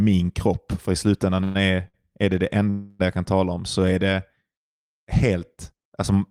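At 1.43 to 1.57 s and again at 2.70 to 3.02 s, a call audio freeze, most likely from packets held up in transit, emptied the jitter buffer. The receiver carried the last sound on as a fading buzz or hiss, for about 114 ms and then 300 ms, before resuming where it had stopped, with nothing lost.

From 1.88 to 1.96 s a short stall from a late packet left the buffer empty for 56 ms. The preceding sound is held too long with a faint buzz or dip, and the speech then continues intact.

From 3.80 to 4.44 s a jitter buffer slow-down rebuilt its reserve by repeating single pitch periods or bits of pauses, adding about 41 ms. The speech plays at 95% speed at unchanged pitch, with sounds slightly drawn out.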